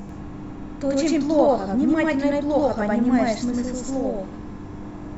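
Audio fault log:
Throughout: channel delay (doubling). Every syllable of the speech arrives twice, the second copy about 93 ms after the first and at the same level. This fits a 4096-sample buffer holding back one channel before both are summed to mono. It differs from reverberation or a room echo because there is exactly one repeat, equal in loudness, with no decaying tail. At this spacing it reads as a distinct slap rather than a thickened, chorus-like doubling.
0.15 to 5.02 s: clock slip clicks. About seven faint ticks sit on the speech, spaced at a steady interval of roughly 0.7 s. They are most noticeable where the sound is loud and sustained, and they disappear in the gaps. The likely cause is two devices running on unsynchronised clocks with an error of around 30 ppm, so one sample is dropped or repeated each time the drift adds up to a whole sample. Their even spacing separates them from random digital clicks or dropouts.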